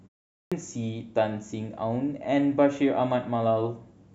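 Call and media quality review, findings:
Clipped start after a pause at 0.37 s: first 146 ms after the 0.37 s leading silence swallowed, onset starts abruptly. Probable component: output device power-saving, sleeping in silence and too slow to wake and relock before sound resumes.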